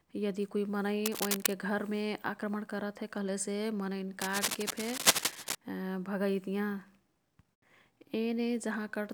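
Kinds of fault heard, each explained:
Cable scratch noise: from 1.05 to 1.53 s and again from 4.21 to 5.56 s, dense, uneven bursts of crackling rustle sit over the speech at roughly the same loudness, likely from a worn cable or connector shifting so its contact resistance flickers rapidly.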